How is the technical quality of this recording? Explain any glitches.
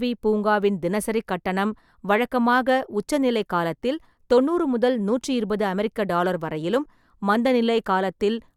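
One glitch stands out in the speech, a corrupt frame decoded at 6.84 s, right after "இருபது அமெரிக்க டாலர் வரையிலும்". Damaged bits in a couple of compressed frames were played rather than concealed, so misread gains and codes pushed energy into the wrong frequency bands for just that span. It sounds like a brief, quiet chirp or blip, low in level at around -45 dBFS. On a spectrogram it appears as a thin vertical smear of misplaced energy. The waveform shows only a tiny irregular spike.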